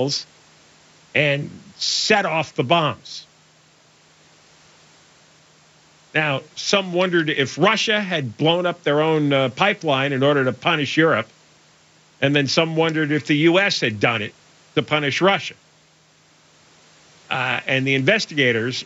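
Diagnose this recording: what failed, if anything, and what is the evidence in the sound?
Nothing in this speech recording points to a failure at any stage. The call's microphone processing leaves nothing above 8 kHz and trims the lowest bass as intended, and the room's background noise sits about 37 dB below the speech.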